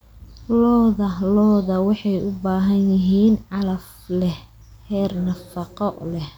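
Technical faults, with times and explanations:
Nothing here needs flagging: the speech runs its full course without any technical faults turning up along the way.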